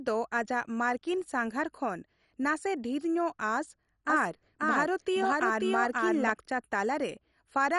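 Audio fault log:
Throughout: MP2 compression. The speech sounds dull and granular, with a gurgling texture and nothing above about 11.3 kHz. Starved upper sub-bands switch off and flicker, and those kept are coarsely quantised. This likely comes from MP2 coding at a low bitrate, around 48 kbps.
4.10–6.30 s: doubled audio track. A second full-band copy of the speech runs about half a second behind, at roughly equal level. It has no decay or room colour. It starts and stops abruptly, likely from a slower second capture path mixed in.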